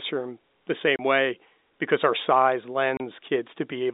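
Packet loss filled with silence at 0.96 and 2.97 s: 30 ms holes, each fitting one lost packet, cut into the speech with hard edges.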